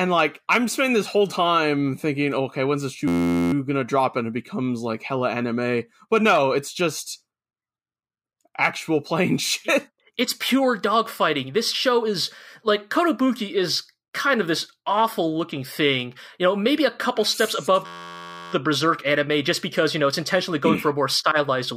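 A speech clip broken twice by a steady 86 Hz buzz, from 3.08 to 3.53 s and from 17.86 to 18.53 s. This is a system hang loop: the system froze while the hardware kept replaying one 11.6 ms fragment, which fits a 512-sample buffer.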